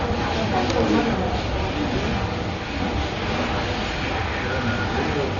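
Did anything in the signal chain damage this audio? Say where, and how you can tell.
Yes. The damage happens at the codec stage and runs the whole way through. Nothing comes through above about 6.9 kHz, so everything sounds dull, and there's a rough, fluttery noise clinging to tonal parts. That pattern fits Dolby Digital compression, likely at a starved bitrate of around 40 kbps. At that rate the encoder narrows the band and leaves many frequency lines with no detail bits, and the decoder fills those gaps with dither noise.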